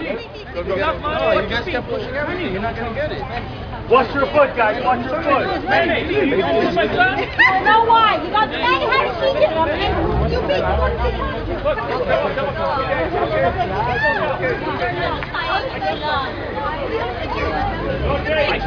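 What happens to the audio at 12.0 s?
Nothing goes wrong at 12.0 s; the audio plays through that moment intact, with no dropout, click or other fault.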